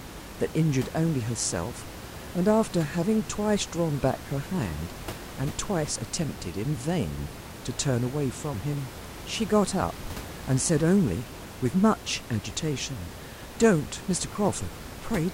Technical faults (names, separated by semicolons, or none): none